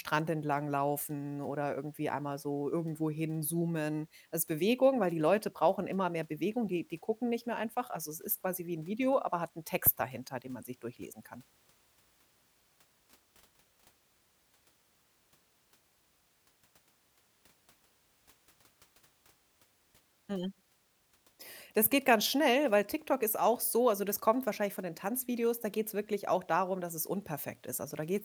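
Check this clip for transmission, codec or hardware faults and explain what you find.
One fault stands out. From 3.47 to 4.49 s the speech runs about 5.2% fast and sits roughly 89 cents sharp, nearly a semitone, then snaps back. This points to a likely drift correction step, where clock-matching software briefly changes playback rate to rebalance its buffer. Unlike wow or flutter, the shift is a single flat step, not a continuous wobble.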